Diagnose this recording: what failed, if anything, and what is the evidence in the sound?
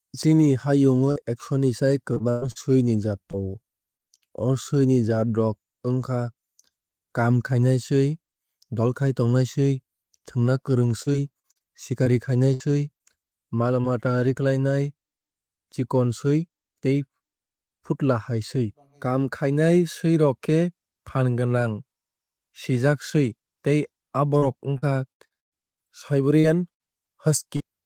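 The network stage failed, causing repeated packet loss (robotic sound) at 1.11–4.32 s, 11.02–13.86 s and 24.38–27.62 s. Each missing stretch, up to about 118 ms long, was filled by stretching the preceding speech, so the speech turns choppy.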